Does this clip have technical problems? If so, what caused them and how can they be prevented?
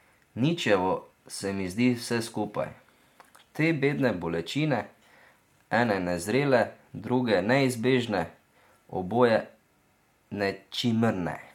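No, there are no technical problems to prevent here.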